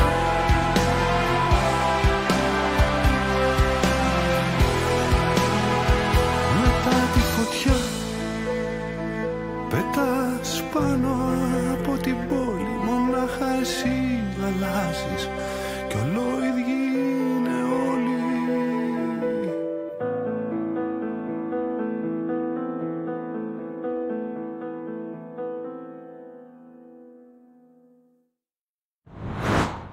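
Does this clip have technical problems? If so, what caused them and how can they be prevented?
No, there are no technical problems in this clip.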